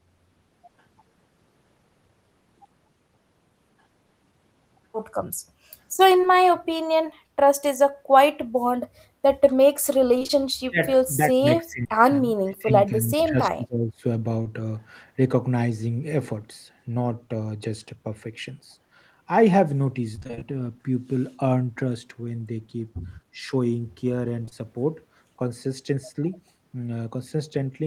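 Short concealed packet loss at 6.21 to 6.25 s: about 20 ms of speech never reached the decoder, and the receiver bridged the gap by extending the preceding sound before fading back into real audio. The result is a brief smear or wobble where a sliver of speech is lost.

An echo leak follows at 6.59 to 6.65 s: a faint copy of the voice returns about 287 ms late, roughly 30 dB below the speech. This is likely loudspeaker sound at the far end that slipped past that side's echo canceller and was transmitted back.

Repeated packet loss (robotic sound) hits at 10.19 to 10.31 s. Three gaps, the longest 21 ms, mean about half of this stretch is synthesised fill. Each patch continues the last sound just before the next hole arrives, giving a choppy texture with pieces missing.

Speech suppressed in double talk then begins, likely from the echo canceller turning everything down while both sides spoke at once and it could not tell the local talker from the loudspeaker echo. 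The voice dips by about 25 dB at 10.42 to 10.48 s and by about 35 dB at 10.68 to 10.77 s. It is pulled down by about 30 dB in pieces across 10.94 to 12.05 s, adding up to roughly 0.7 s. The same happens across 12.24 to 14.04 s, adding up to roughly 1.5 s. Through these stretches the voice sounds hollowed, thin or briefly cut off.

Inside that suppression, two back-to-back short concealed packet losses at 11.83 and 11.87 s together mask about 40 ms with extrapolated sound. Another single loss at 14.43 to 14.47 s leaves a quick smear.

Repeated packet loss (robotic sound) returns at 20.15 to 20.43 s. Here seven gaps, the longest 26 ms, leave again about half the span concealed, and the garbled, robotic chop is longer this time.

Finally, two consecutive short concealed packet losses at 24.45 and 24.49 s bridge roughly 40 ms of missing audio with a short wobble.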